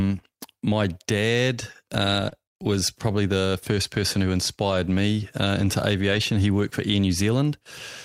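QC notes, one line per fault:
2.29–2.33 s, short concealed packet loss: right after "my dad uh" and before "was probably the first", about 20 ms of audio never arrived. The decoder extended the preceding sound for roughly 21 ms and blended back, leaving a brief smear.
6.11–6.17 s, lost packet rebuilt from error correction: just after "me uh into", about 40 ms was replayed from the low-bitrate redundant copy carried in following packets, which fits two lost packets. There is no gap, but that stretch sounds rougher and noisier.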